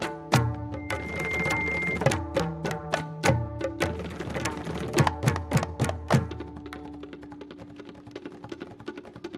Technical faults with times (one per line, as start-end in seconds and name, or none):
0.76-2.02 loudspeaker feedback squeal